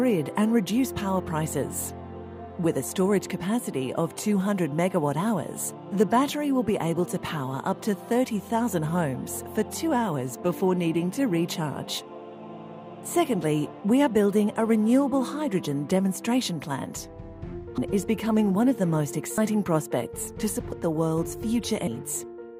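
At 17.78 s, 19.38 s, 20.72 s and 21.87 s, compressed frames are skipped: blocks of encoded audio never reach the output, so playback jumps forward. The jumps are about half a second, a tenth of a second, 150 ms and half a second, which fits 32 ms frames. Each join is followed by audio that has lurched ahead.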